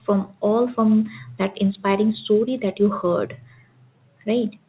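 Loudspeaker feedback squeal runs from 2.09 to 2.94 s: the microphone re-captured its own loudspeaker output, and at 5.7 kHz the loop gain exceeded one. That tone swells over roughly a third of a second into a piercing whistle, around 10 dB louder than the speech.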